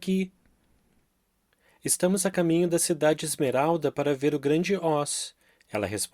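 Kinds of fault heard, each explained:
Overlap between stream segments: the time stamps of two neighbouring segments in the stream, which appear to be cut at 4-second intervals, claim the same stretch of time, so the player discards the overlapping portion even though that speech was never actually duplicated. A sliver of only a few milliseconds is removed, and the waveform jumps from one point to another without a smooth join. In this clip that produces a single brief click or tiny skip at 2.33 s.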